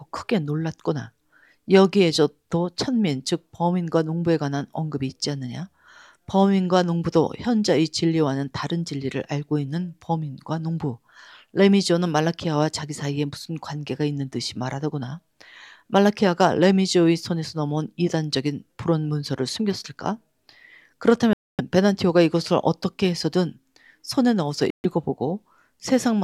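At 21.33 s and 24.70 s the sound drops to clean silence for about 0.26 s and 0.14 s, then resumes, likely Bluetooth stalls, with no glitchy concealment filling the gaps.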